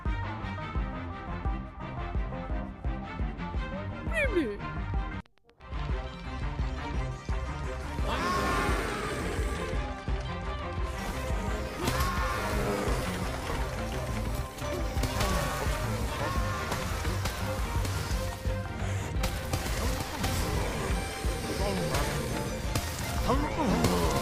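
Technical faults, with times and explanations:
4.90–6.71 s: train of clicks. Likely interference or a faulty connection injects regular pulses, 8.3 per second, around fifteen in all, ticking about as loud as the sound itself.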